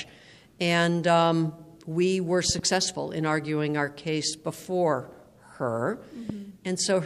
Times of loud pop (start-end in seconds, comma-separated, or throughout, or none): 2.49-2.61, 6.29-6.32